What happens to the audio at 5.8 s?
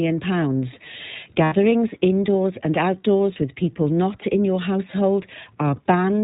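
Right around 5.76 to 5.80 s there's a short dropout from lost iLBC frames. The decoder covers the gap by repeating the last pitch cycle with a bit of noise, so you get a brief held, slightly buzzy vowel, which fits a single 20 ms frame going missing. Since iLBC frames don't depend on each other, the sound is back to normal almost immediately afterward.

Underneath that, the iLBC codec itself is plainly audible. It's narrowband, so there's nothing above 4 kHz, and the excitation coding gives the sound a rough, slightly synthetic edge. The frame behaviour fits its 20 ms mode at 15.2 kbps.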